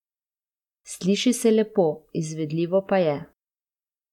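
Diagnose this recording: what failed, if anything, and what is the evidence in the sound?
Nothing failed here; listening through the speech, there's no break, glitch or distortion anywhere along the chain that points to a problem at any stage.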